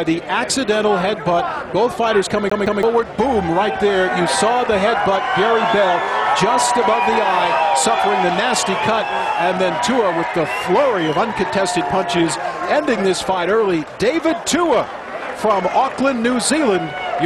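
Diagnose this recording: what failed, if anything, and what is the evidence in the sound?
CD stuck on one turn at playback: from 2.50 to 2.83 s a 168 ms slice repeats twice, showing as identical waveform blocks split by brief mute gaps.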